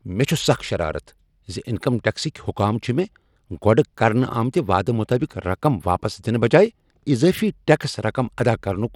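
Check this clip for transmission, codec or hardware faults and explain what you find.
The speech carries Bluetooth SBC compression throughout, likely from a low bit pool on an SBC Bluetooth link. The codec splits the signal into a few wide sub-bands and allocates bits with no real hearing model. At a rate that fits roughly 96 kbps, the upper bands get too few bits and the rest are coarsely quantised. The result is plainly audible: gritty noise and aliasing ride on the speech, and nothing remains above 18.9 kHz.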